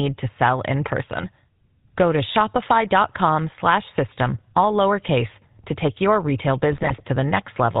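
Throughout, the speech has the buzzy, gravelly roughness of the GSM full-rate codec, consistent with 13 kbps. Unlike a plain low-pass muffle, it has coarse pulsed excitation, and nothing passes above 4 kHz. From 6.72 to 7.02 s, just after "to take your retail", GSM bit errors corrupt the decoder's filter, pitch and gain values over several frames, producing squawks, pops and gargling rather than the silent gaps of lost packets.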